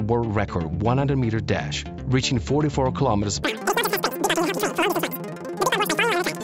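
From 3.43 s to the end at 6.44 s, the audio suddenly runs three times too fast and about 19 semitones higher, the mark of a wrong sample rate. The threefold ratio fits material captured at 16 kHz being read out at 48 kHz with no conversion. What sets this apart from a pitch shift or a time-stretch is that speed and pitch move together by exactly the same factor, with neither held steady.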